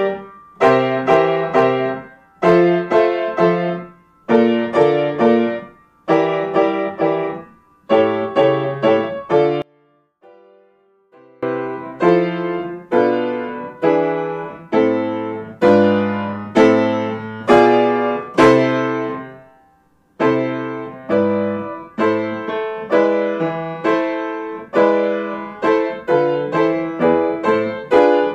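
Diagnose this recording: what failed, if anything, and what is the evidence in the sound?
From 9.62 to 11.43 s the sound drops by about 32 dB and turns faint, the signature of one channel inverted, most likely from a polarity-reversed lead in the analogue wiring. Summed to mono, material common to both channels cancels, leaving only their difference.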